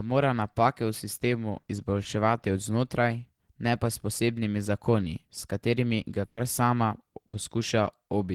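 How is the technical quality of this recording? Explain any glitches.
The speech has two short dropouts near the end. Each sounds like a brief smeared hold followed by a jump forward.

A burst of packet loss occurs at 6.25–6.40 s, just after "katerimi ga", and again at 7.27–7.36 s. Consecutive packets failed to arrive, so the receiver extended the last sound for about 120 ms and 60 ms, fading it into a buzz or hiss. Playback then resumes with the same lengths of speech missing.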